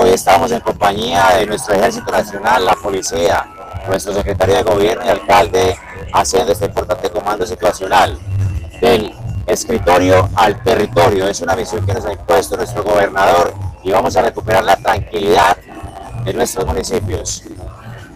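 The audio carries a steady buzz at about 91.9 Hz from start to finish and plays 1.07 times too fast at roughly normal pitch. That is a truncated block size mismatch: the reading stage discards the tail of each longer written block, which fits 512-sample blocks.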